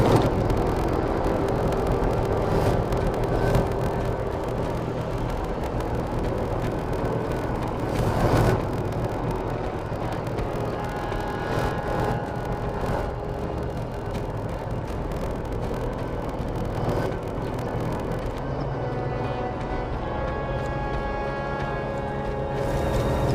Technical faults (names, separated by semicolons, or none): block size mismatch (padded)